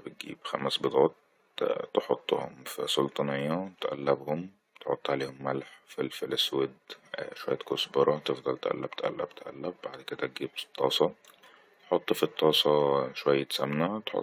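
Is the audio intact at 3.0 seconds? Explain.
Yes, the speech is intact at 3.0 seconds, with no fault present at that moment.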